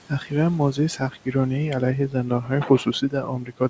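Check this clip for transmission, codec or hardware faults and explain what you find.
One fault recurs: speech cut by the noise suppressor, at 0.09–0.33 s, 0.96–1.35 s, 2.09–2.51 s and from 2.67 s to the end. The suppressor mistook quiet speech for background noise and turned it down by about 10 to 12 dB, so the quiet parts sound swallowed and faint. Packet loss would leave abrupt gaps or clicks. Here the sound only fades along with the background.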